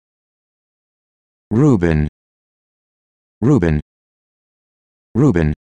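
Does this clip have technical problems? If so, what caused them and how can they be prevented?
Yes. A time-stretched section runs from 2.01 s to the end at 5.67 s, where the audio suddenly moves at 1.5 times its earlier pace while its pitch stays put. It sounds rushed, the result of likely processing that squeezed this stretch to fit a shorter length by dropping short slices and splicing the rest together. To prevent it, trim or edit content rather than compressing duration, or use a higher-quality stretch algorithm sparingly.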